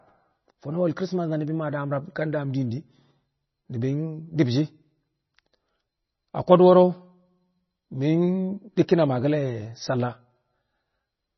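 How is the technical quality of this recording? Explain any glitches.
The recording has one problem that runs through the whole clip: heavy lossy compression.

MP3 compression, throughout: nothing is present above about 5.9 kHz, and the speech has a watery, swirling texture with metallic chirps on s sounds and smeared consonant onsets. This is likely the result of an MP3 encoder starved of bits, which fits a rate near 24 kbps. To save data it discards the treble above a fixed cut-off and drops weaker frequency components, which then flicker in and out from frame to frame.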